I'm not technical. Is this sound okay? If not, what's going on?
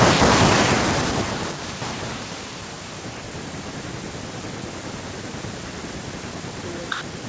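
No. The speech dips sharply and breaks up from 3.6 to 4.43 s and again from 4.6 to 6.48 s. This is speech suppressed in double talk. Both sides likely talked at once, and the call's echo canceller turned this voice down.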